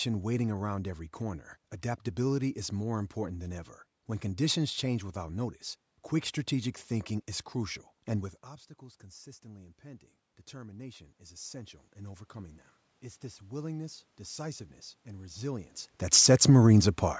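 Speech, and from around 8 s the talker drifts away from the mic, so the level drops by about 19 dB. Between 8.79 and 16.57 s you hear automatic gain rising: the gain control creeps up about 11 dB, lifting voice and room noise together in a slow swell.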